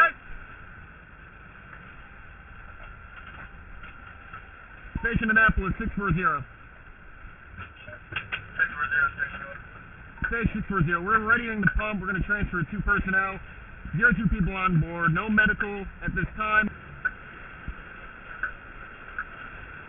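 Aliasing runs through the whole clip. The audio was resampled down without an anti-alias filter, which fits a target rate near 6 kHz. Content above 3 kHz folds back as false, unrelated tones roughly 15 dB below the signal, giving a gritty, metallic edge.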